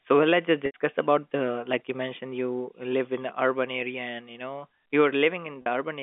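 At 0.66 to 0.74 s, just before "about the like you", an 80 ms gap is bridged by packet loss with pitch repetition, which fits about four 20 ms packets. The receiver replays the last pitch period and fades it out, so the sound holds on a buzzy, frozen tone that dies away before speech resumes. A shorter 40 ms loss at 5.62 to 5.66 s gives only a brief held buzz. Both sit within the 200 to 3500 Hz G.711 telephone band.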